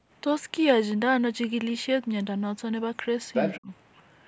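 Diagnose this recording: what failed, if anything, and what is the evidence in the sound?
Other side's voice leaking through, at the call-processing stage. From 3.34 to 3.56 s a second voice appears at roughly the same level as the talker. The likely cause is that the far end's loudspeaker output reached the microphone and the echo canceller failed to subtract it. On a spectrogram this shows as a second set of harmonic traces overlapping the talker's, confined like the rest of the call band to below 8 kHz. In the waveform the envelope thickens with no clear gap between the two sources.

Speech suppressed in double talk, also in call processing. Between 3.58 and 3.7 s, right after the leaked voice, the talker's level drops steeply, by around 30 dB, for about a tenth of a second. This fits the echo canceller's suppressor clamping down while both sides were active. It couldn't separate near speech from echo, so it attenuated everything. 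The waveform shows a sudden narrow notch in amplitude, and the spectrogram shows a short vertical band where the energy nearly vanishes before the talker returns.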